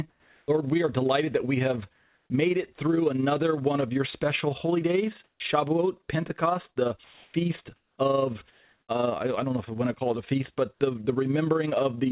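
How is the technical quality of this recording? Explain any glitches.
Not great: a steady ripple runs through the whole clip, the background keeps getting swapped out in the pauses, and one word loses its start. It's narrowband telephone audio with nothing above 4 kHz.

Overlap-add ripple, throughout: the frames were rejoined with uneven overlap gain, so the level pumps by about 6 dB around 20 times a second, giving a fast, rough flutter.

Comfort noise in place of the background, at 0.1–0.48 s, 1.96–2.3 s (between "delighted that we have" and "made it through another"), 5.24–5.4 s (after "your special holy days"), 7.04–7.34 s, 7.76–7.98 s and 8.52–8.88 s (before "uh I I don't"): the sender likely stopped transmitting in the pauses, and the receiver filled them with smoother synthetic noise. Mostly the level shifts by about 1–2 dB, and it rises by about 1 dB at 8.52 s. The 5.24 s gap drops about 11 dB.

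Onset clipped by the voice detector, 5.36–5.4 s: the detector was likely slow to catch the restart, so 40 ms went missing and the sound kicks in abruptly.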